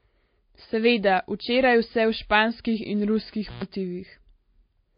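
Speech whose audio stops dead at 5 kHz throughout, with two different flavours of coding smear layered together, likely from transcoding between lossy codecs, pointing to a low-rate MP3 re-encoded as WMA rather than a single encoder. Just after "in ruskih", from 3.48 to 3.63 s, an intermittent contact opens the line for about 119 ms; crackle at both edges and faint hiss in the gap distinguish it from a clean digital dropout.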